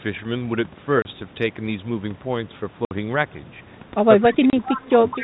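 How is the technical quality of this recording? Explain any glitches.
The recording has some real problems: three short dropouts, and a messy last second where the talker gets ducked and an echo creeps in.

Packet loss filled with silence hits at 1.02–1.05 s, 2.85–2.91 s and 4.50–4.53 s. Packets went missing and the receiver just played nothing in their place, so the speech has abrupt holes. The first and last gaps are 30 ms each; the middle one is 60 ms, which fits two consecutive 30 ms packets dropping together.

From 4.21 s to the end, the speech is pulled down in pieces, about 0.7 s of it in total, with the deepest dips around 20 dB. The likely cause is speech suppressed in double talk. Both ends were talking at once, and the echo canceller couldn't tell this talker apart from loudspeaker echo, so it turned the lot down. You hear the level sag and chop out in patches.

Over that same stretch, at 4.66–4.91 s and again from 5.1 s to the end, a faint second copy of the voice trails the original by 211 ms, sitting about 15 dB below it. 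That's most likely an echo leak. One side has the call on a loudspeaker, and its canceller didn't fully scrub what its mic picked up, so a delayed echo got sent back.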